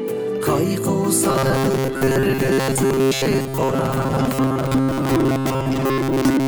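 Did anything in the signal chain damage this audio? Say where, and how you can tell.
Yes. Robotic sound from repeated short buffers runs from 1.30 s to the end at 6.47 s. A rigid metallic buzz sits at 134 Hz, a period of about 7.5 ms, and the sound loses its natural movement, following its original contour only roughly. This likely comes from the driver or buffer stage running short of fresh audio. It fills the gaps by looping the last few milliseconds for most of the stretch, roughly 70 percent, and the true signal is skipped.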